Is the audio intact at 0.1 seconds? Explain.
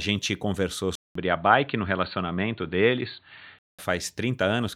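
Yes, the speech at 0.1 seconds plays through cleanly with nothing interrupting or altering it.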